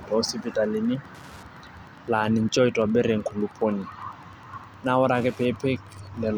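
Wi-Fi interference runs throughout: a nearby radio's beacon, every 102.4 ms, is rectified by the audio circuit, producing faint steady ticking about ten times per second beneath the speech.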